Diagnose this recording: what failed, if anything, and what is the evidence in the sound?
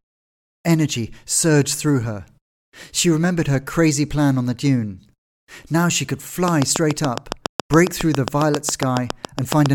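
A train of clicks runs from 6.48 s to 9.67 s, right after "she could": about twenty near-identical ticks at a regular 7.24 per second, peaking about 20 dB above the speech. Such evenly repeating pulses point to likely electrical interference coupling into the analogue wiring.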